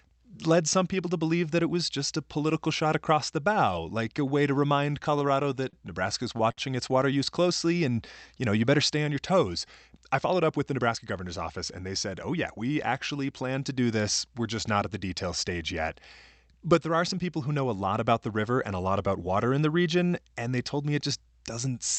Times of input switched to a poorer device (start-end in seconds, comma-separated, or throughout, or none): none